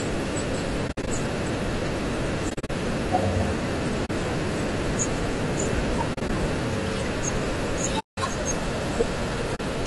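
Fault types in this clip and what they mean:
Low-delay AAC compression: The speech sounds rough and grainy throughout, with noise between the harmonics and a thin, synthetic-sounding top band. The likely cause is AAC-ELD, the short-frame codec used for video calls, at a bitrate around 32 kbps.
AAC frame loss with muting: Six spells of soft-edged holes fade the speech out and back in. They range from 40 ms to 180 ms, and some are scattered over 200 ms. The decoder zeroes the spectrum of missing frames, which fits 20 ms frames.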